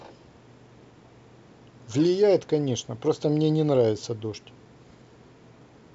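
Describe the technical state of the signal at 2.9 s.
At 2.9 s the signal is intact, with the G.722 wideband telephone coding carrying the speech up to about 7 kHz and no fault present at that moment.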